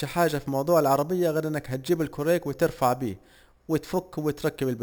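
A speech recording with imaging from sample-and-hold upsampling throughout. Each sample of a 12 kHz original was repeated four times to reach 48 kHz without smoothing. This adds a metallic fizz that tracks the speech, with the first image between 6 and 12 kHz at about 21 dB below the signal. A spectrogram shows mirrored copies of the speech folded around 12 kHz and its multiples, and a zoomed waveform shows flat four-sample steps.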